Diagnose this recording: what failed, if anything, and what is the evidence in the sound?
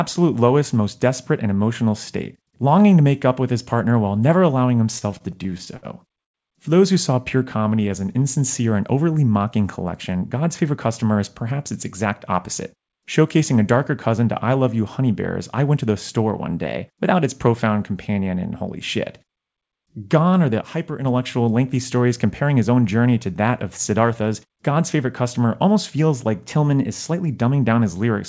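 Repeated stalls (stutter) in the network and jitter-buffer stage, from 4.78 to 6.36 s. Playback catches 16 times, the longest hold about 105 ms, and roughly a fifth of that stretch is filled by continuing the previous sound. Nothing is dropped, so the audio drags and stutters rather than skipping. The buffer ran dry repeatedly as packets arrived late. Unlike a time-stretch, the hesitations are discrete holds, not a smooth change of pace.

A jitter buffer slow-down follows from 7.45 to 8.24 s. Delivery drops to 87% speed at unchanged pitch, and about 112 ms of material is added by repeating individual pitch periods to rebuild the buffer's reserve. Sounds become drawn out, with no hard stops as in the stutter. Pitch holds steady, which separates this from a clock-rate change.

Jitter buffer speed-ups occur at 10.15–11.59 s (107%, just after "and overly mocking"), 12.75–13.38 s (108%, just before "a darker cousin to"), 22.04–22.77 s (107%) and 25.68–26.28 s (105%). 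The buffer held more than its target delay, so the receiver trimmed pitch-period-sized slices, removing around a tenth of a second at most. Pace hurries while pitch stays put. That constant pitch is what distinguishes these from the drift steps.

A drift correction step, most likely from clock-matching software in the driver or buffer stage, shifts speed and pitch together by about 5.5%, roughly 93 cents or close to a semitone. It runs from 16.66 to 17.23 s, between "to the store one" and "its profound companion and", and again from 26.46 to 27.31 s. The audio goes sharp and fast, then snaps back. Because pitch moves with tempo, this cannot be jitter-buffer time-scaling.

A sudden gain jump at 20.61 s drops the level by about 5 dB until 21.05 s. The background noise falls by the same amount, and the change lands at a single instant with no ramp. That points to a digital gain setting or bit shift applied sample-to-sample in the processing chain. 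A network or codec problem would not move noise and signal together this abruptly. The G.722 call path underneath shows its normal band limit, with nothing above 8 kHz.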